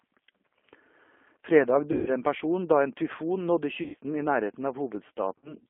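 The whole clip runs through a G.729 codec, and the damage is easy to hear. The sound points to the 8 kbit/s G.729A flavour, where speech is rebuilt from a vocal tract filter, a pitch predictor and a handful of pulses per frame rather than sent as a waveform. That gives the speech a slightly rough, synthetic edge. The line band sits roughly between 250 Hz and 3.4 kHz, so it's thin at the bottom and dull on top.

On top of that there are three spots of VoIP packet loss concealed by the speech codec. The first is from about 1.92 to 2.10 s, just before "en person da". The second runs from 3.83 to 3.95 s, right after "tyfon nådde". The third is from 5.38 to 5.55 s. In each case the decoder has no data, so it keeps extrapolating from the last pitch and filter it had while turning the gain down. That smears the speech into a fading buzzy tone or coloured noise, and the speech stays a bit weak for a moment after the packets come back. 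The gaps fit about 150 ms, 110 ms and 50 ms of lost audio, which works out to around 15, 11 and 5 of the codec's 10 ms frames.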